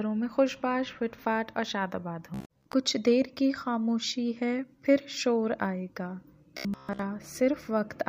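From 2.34 to 2.73 s the sound turns into a rigid, metallic buzz at about 66.7 Hz that only loosely tracks what came before, and it returns from 6.57 to 7.04 s. This is robotic sound from repeated short buffers, likely caused by audio arriving too seldom so that a chunk of about 15 ms is replayed to fill the gap. Roughly half of the first stretch and most of the second is repetition rather than new audio.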